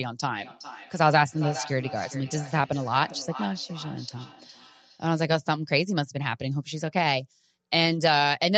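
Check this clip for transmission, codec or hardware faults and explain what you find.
There's one fault in this speech clip: feedback echo between two devices, running from 0.40 s to about 5.08 s. Each stretch of speech comes back roughly every 0.4 s, and the repeats sound thinner and more ringy each time round, peaking at about 14 dB below the direct speech. It's the classic two-devices-in-one-room loop. One device plays out what the other's microphone sent, that microphone hears it again and sends it back. Each device's echo canceller only knows about its own playback, so neither one catches the loop.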